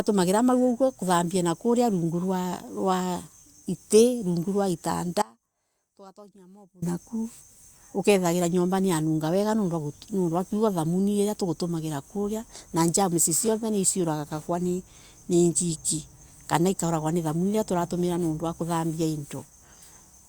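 Speech clip with an audio dropout to a faint residue from 5.22 to 6.82 s: about 1.6 s gone, leaving only a faint leak roughly 25 dB down, likely a brief signal-path break.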